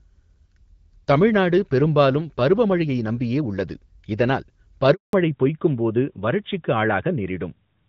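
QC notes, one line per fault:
4.93–5.13 s, handover gap: the sound dies away within a few tens of milliseconds and stays fully silent for 200 ms while the call switches networks and no frames arrive. Unlike a dropout or packet loss concealment, nothing is smeared or repeated. The audio simply stops, then resumes.
5.13 s to end, fallback to narrowband: right after the gap, everything above 4 kHz disappears and the sound turns duller and rougher, which fits a switch from AMR-WB at 12.65 kbit/s to AMR-NB at 12.2 kbit/s. A low-pass filter would not add this rasp, and the abrupt onset at the handover marks it as a codec change.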